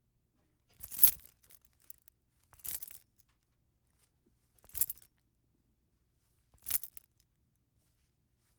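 No technical faults can be heard at any point in this recording of sounds.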